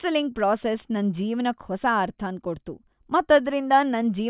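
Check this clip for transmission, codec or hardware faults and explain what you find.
Nothing stood out on listening to this speech recording.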